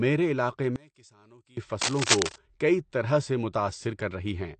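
Throughout, the speech sounds dull and smeared, with nothing above 8.7 kHz. This is likely AAC compression, at a low bitrate near 32 kbps.

From 0.76 to 1.57 s, the level drops by about 25 dB. One channel is likely inverted, so the shared centre cancels in mono.

From 1.81 to 2.38 s, dense uneven scratching sits over the speech at roughly equal loudness. This is likely cable scratch noise from a disturbed contact.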